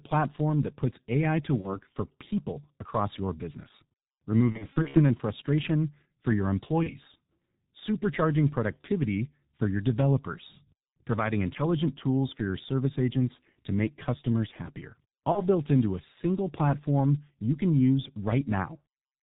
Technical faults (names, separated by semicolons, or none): G.723.1 codec; VoIP packet loss concealed by the speech codec